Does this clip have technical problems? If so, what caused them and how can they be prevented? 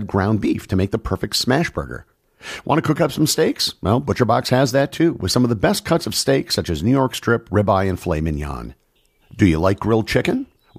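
No, there are no technical problems to report here.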